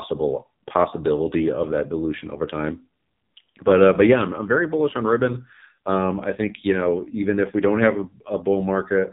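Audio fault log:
Throughout: AMR narrowband mobile codec. Speech is cut off above 3.8 kHz and sounds buzzy and synthetic from heavy coding, consistent with a low bitrate near 5.9 kbps.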